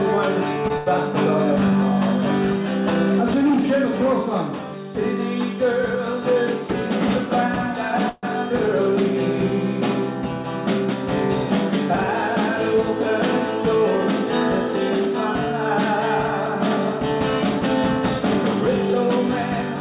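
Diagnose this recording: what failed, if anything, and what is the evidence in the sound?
Network and jitter buffer: late packets emptied the buffer, causing short stalls from a late packet at 0.68 s (18 ms) and 0.78–0.88 s (81 ms). The last sound is held briefly.

At 8.09–8.25 s the sound is held as a fading buzz for about 137 ms and then resumes, likely a call audio freeze from packets delayed in transit.

The jitter buffer speed-up runs from 16.48 to 19.76 s. The buffer trimmed roughly 70 ms of pitch periods, so the audio plays about 2% faster at unchanged pitch.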